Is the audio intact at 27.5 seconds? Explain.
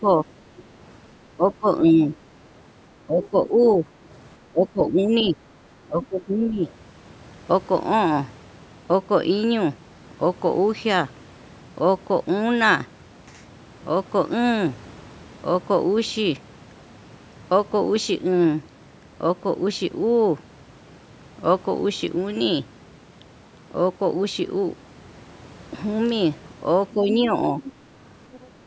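No. Around 27.5 s two problems overlap. From 26.92 to 28.47 s there is other side's voice leaking through. The far end's voice, played on the talker's loudspeaker, was picked up again by the microphone, and the echo canceller failed to strip it out. A faint second voice, roughly 15 dB below the talker, runs underneath. The likely cause is that leftover loudspeaker echo.

From 26.94 to 27.56 s, speech is suppressed in double talk. With both sides talking at once, the canceller likely could not separate its own talker from the echo and pulled everything down. The talker's level dips by around 5 dB at its deepest, affecting about a third of a second in total.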